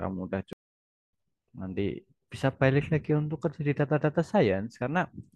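At 0.53 s the speech cuts to silence mid-flow and stays silent for about 600 ms, coming back at 1.13 s. This playback stall was likely caused by the player running out of buffered data or its thread being blocked.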